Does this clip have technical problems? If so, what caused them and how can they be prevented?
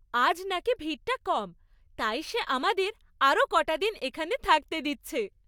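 No, nothing technical goes wrong anywhere in this one, so there's nothing to fix or guard against.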